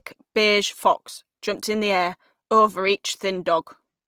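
A speech clip carrying plainly audible Opus compression from start to finish: the sound turns rough and grainy, with noise filling the upper bands rather than the swirling, hollowed-out artefacts of MP3. Full bandwidth is kept, and the damage points to a low bitrate around 24 kbps, likely in Opus's CELT music mode.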